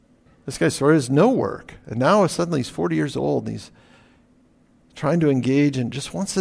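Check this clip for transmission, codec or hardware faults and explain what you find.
Nothing turned up here: I listened through the whole speech recording and couldn't hear any fault from the transmission path, a codec or the hardware.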